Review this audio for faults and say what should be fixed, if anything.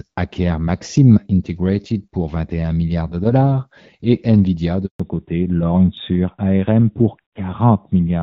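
A handover gap opens at 4.86 s and lasts 140 ms, to 5.00 s. While the call switched networks, no speech frames arrived, so the sound fades quickly and stops. On a waveform it is a flat line, and on a spectrogram a blank vertical band. Configuring make-before-break handover with jitter-buffer concealment would prevent it.

A fallback to narrowband follows at 5.00 s and runs to the end. Before it, the light coding matches HD Voice at around 12.65 kbit/s. After it, the codec switches to narrowband AMR, so everything above 4 kHz disappears and the speech turns duller. A spectrogram shows the energy cut off flat at 4 kHz. Keeping wideband codec support on both networks would prevent it.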